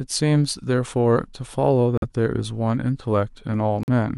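Corrupted compressed frames were rejected by the decoder and replaced with silence, leaving abrupt speech dropouts of corrupt frame muted at 1.96–2.04 s and 3.83–3.89 s, with timing preserved.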